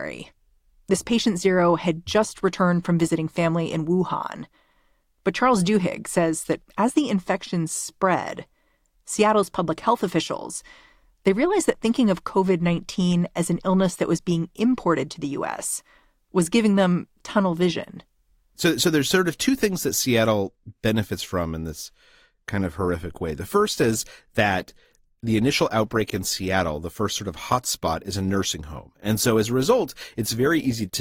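Adaptive stream at a lower bitrate, from 22.14 s to the end, just after "benefits from in this": the speech abruptly picks up codec artefacts with no gap, which fits the stream switching from a 64 kbit/s to a 24 kbit/s Opus version as the connection slowed.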